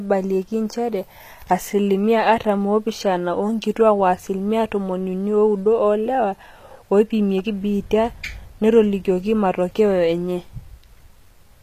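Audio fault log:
throughout, HE-AAC compression: plainly audible codec damage, with the treble above a crossover not matching the lower sound, and nothing at all above 14.9 kHz. The cause is likely HE-AAC at a bitrate that fits about 24 kbps: only the lower spectrum is coded, and the upper bands are rebuilt by copying lower content upward under a coarse envelope. The rebuilt treble is a stand-in rather than the original, so its harmonics don't line up across the join.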